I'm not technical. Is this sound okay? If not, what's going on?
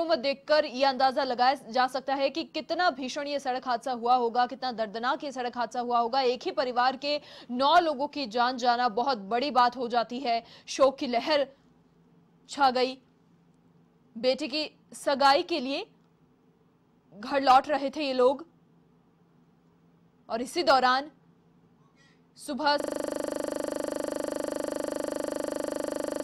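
No. At 22.8 seconds there is a system hang loop: the computer stopped feeding new sound, but the playback hardware kept replaying the last small chunk it held. That chunk is only 40 milliseconds long, so it repeats 25 times a second, around 86 times in all. Instead of continuing, the sound turns into a rough, steady buzz that carries on to the very end of the clip.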